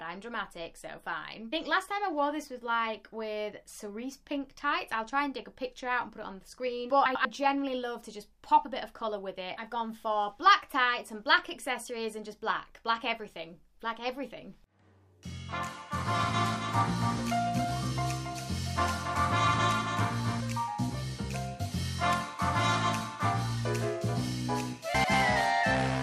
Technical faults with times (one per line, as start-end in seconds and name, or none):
7.05-7.25 frames out of order
15.94-20.40 doubled audio track
24.94-25.14 frames out of order